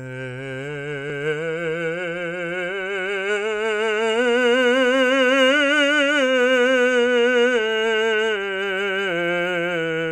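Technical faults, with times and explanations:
No technical faults are audible in this music; the signal is continuous and steady across the whole clip.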